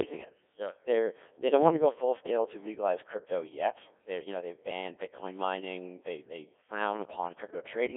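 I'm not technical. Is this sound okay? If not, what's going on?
No. For the whole clip, the speech has passed through a Codec 2 vocoder, which rebuilds the voice from simple tones, making it robotic, buzzy and heavily degraded.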